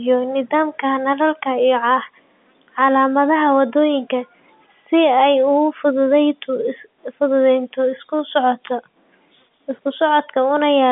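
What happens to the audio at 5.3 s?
Nothing goes wrong at 5.3 s; the speech there carries through intact within the same narrow telephone band as the rest of the call.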